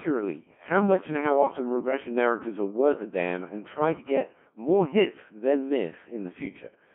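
Robotic, buzzy speech runs throughout, with heavy damage from a Codec 2 vocoder at 1.6 kbit/s: only pitch, voicing and envelope survive, resynthesised from sine waves within a 150 Hz to 3.4 kHz band.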